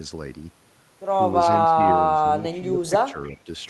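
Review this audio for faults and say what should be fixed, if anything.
Speech suppressed in double talk at 1.66–2.29, 2.58–2.92 and 3.11–3.48 s, dipping about 15, 10 and 5 dB, likely an echo canceller ducking during overlap. The waveform envelope sags.

Echo leak at 2.63–2.68 s: a faint repeat about 30 dB down, delayed 294 ms, likely residual loudspeaker pickup. It shows as a weak trace shifted right of the original.

Tuning the echo canceller's double-talk detection and residual suppression, with better loudspeaker–microphone isolation, would prevent both.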